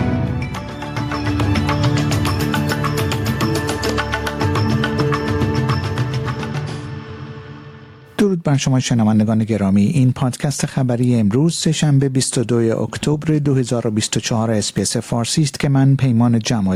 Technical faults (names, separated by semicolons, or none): gain pumping